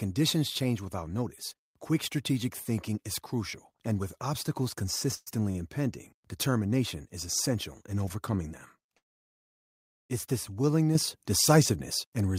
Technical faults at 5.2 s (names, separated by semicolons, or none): call audio freeze